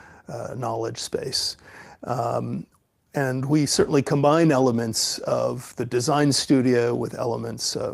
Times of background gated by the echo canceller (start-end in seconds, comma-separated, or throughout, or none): none